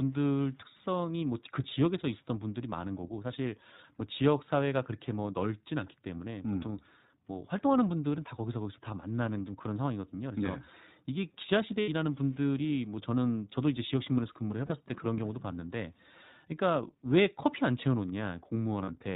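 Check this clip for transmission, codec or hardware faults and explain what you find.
Two faults are present: iLBC codec coloration across the whole recording, and three short dropouts from lost iLBC frames.

Throughout, the speech carries plainly audible iLBC codec damage: a rough, slightly synthetic edge, with nothing above 4 kHz. The sound fits iLBC's 15.2 kbps mode with 20 ms frames, each coded independently. A spectrogram shows a hard ceiling at 4 kHz.

Lost iLBC frames occur at 11.80–11.90 s (80 ms, consistent with four missing frames), 14.66–14.72 s and 18.84–18.90 s (40 ms each). The decoder repeats the last pitch cycle blended with noise, giving a held, buzzy vowel. The waveform shows repeated similar cycles, and the spectrogram shows smeared, static harmonics before clean recovery.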